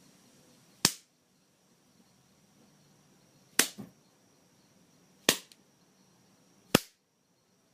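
No technical faults are audible.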